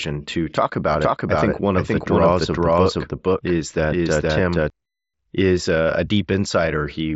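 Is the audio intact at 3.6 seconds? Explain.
No. From 0.94 to 4.7 s, just after "to talk", a dry, full-band second copy of the speech trails about half a second behind at roughly equal level, starting and stopping abruptly. This doubled audio track likely comes from a second, slower capture path.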